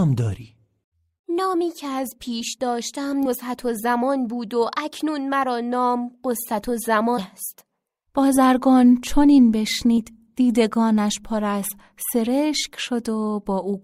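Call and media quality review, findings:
Compressed frames skipped, three spots: 3.25–3.28 s, 7.17–7.22 s and 9.97 s. The speech jumps forward each time, roughly 70 ms lost at the first two and about 100 ms at the last, which fits several 20 ms codec frames going missing or getting rejected by the decoder.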